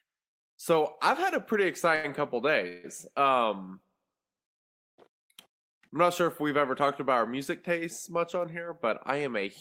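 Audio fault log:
1.95–2.06 s, short stall from a late packet: just after "I've had a pretty", the jitter buffer ran dry and the last sound was held for 84 ms with a slight buzz or dip, then resumed with nothing lost.
2.68–2.86 s, call audio freeze: the sound is carried on as a fading buzz or hiss for 158 ms, then continues where it stopped. This is likely packets held up in transit, emptying the jitter buffer.
4.61–5.00 s, call audio freeze: a 370 ms stretch of silence is inserted, then the audio picks up exactly where it left off, most likely because delayed packets drained the jitter buffer.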